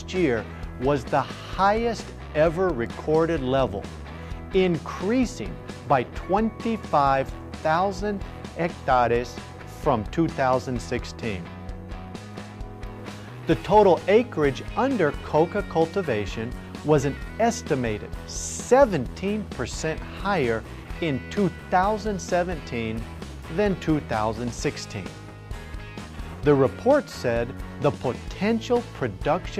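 There are no technical faults to describe.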